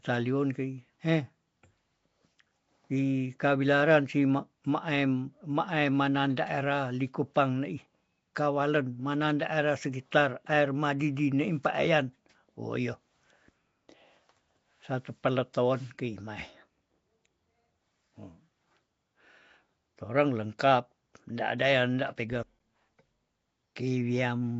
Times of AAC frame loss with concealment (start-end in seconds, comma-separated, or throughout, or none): none